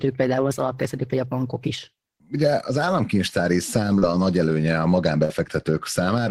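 Short concealed packet loss occurs in this speech recording at 1.09 s and from 3.99 to 4.03 s. Audio failed to reach the decoder in time, and the receiver bridged each hole by extending the preceding sound. The first is a near-instant smear, with about 10 ms missing. The second is a 30 ms smear. A burst of packet loss follows at 5.25 to 5.30 s: about 47 ms of continued, fading sound stands in for lost audio, then playback resumes with roughly 40 ms of speech gone.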